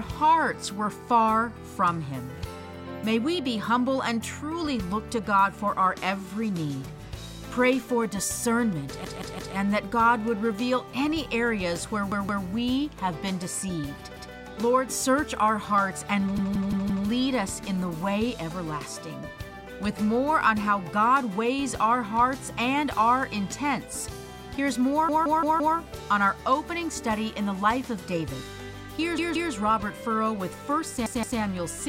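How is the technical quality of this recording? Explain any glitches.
The recording has repeated buffer faults at 9.05, 12.12, 14.17, 16.38, 25.09, 29.18 and 31.06 s. A piece about 171 ms long, which fits an 8192-sample buffer, plays two to five times with hard joins. New audio arrived late. Nothing seems lost.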